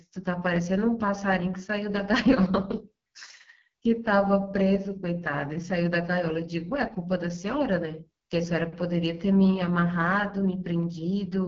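From start to finish, the speech carries the heavy damage of the AMR wideband (HD Voice) codec, and the roughness points to its lowest mode, around 6.6 kbit/s. The pulse-driven model cannot rebuild the voice faithfully at that rate, so it sounds rough and raspy. On a spectrogram, energy stops sharply at 7 kHz, and the band from 6.4 kHz up shows smeared, noise-like texture instead of harmonic detail.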